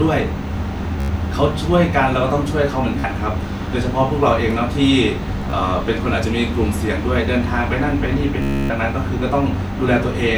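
Bluetooth stutter occurs at 1.00 to 1.09 s, 3.00 to 3.04 s, 5.42 to 5.53 s (broken into short gaps) and 8.42 to 8.70 s. Each time, the receiver replays a short slice because packets arrive late or not at all. This is heard as a buzzy repeat, and the waveform shows identical repeating blocks. The speech then resumes further on.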